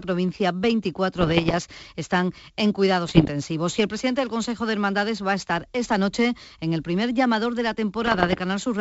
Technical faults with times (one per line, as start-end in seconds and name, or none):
1.18-1.58 bit errors on an ADPCM link
3.06-3.30 bit errors on an ADPCM link
8.02-8.39 bit errors on an ADPCM link